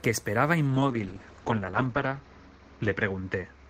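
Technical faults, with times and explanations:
0.69–3.69 s, call bitrate drop: the encoder's budget collapses and coarser coding makes the speech rough and watery, with the top end cut from 20 kHz to 8 kHz. This fits a fall from roughly 32 to 8 kbps, bottoming out for about 1.1 s.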